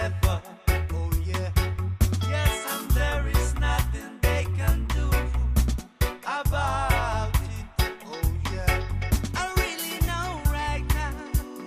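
No technical faults can be heard anywhere in the recording.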